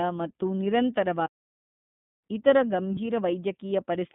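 Speech squeezed through the iLBC codec the whole way, band-limited to roughly 150 Hz to 3.6 kHz, with plainly audible rough, synthetic coding that fits its 13.33 kbps, 30 ms frame mode. From 1.26 to 2.24 s there's a playback stall, almost a full second of dead silence mid-flow, likely the player running dry or its thread getting blocked. Then at 2.94 s you get lost iLBC frames: a 30 ms buzzy, held patch, consistent with one dropped frame being concealed before the speech snaps straight back.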